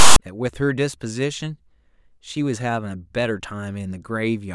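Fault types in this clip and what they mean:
File tags played as audio: a block of text tags at the head of the file got read as though it were sample data, so the clip opens with a harsh rasp from 0 to 0.16 s before the speech starts. Since text bytes sit mostly in a narrow range of values, the waveform ends up lopsided, offset to one side, and loud. It cuts in and out with hard edges, like a short burst of static glued onto the front.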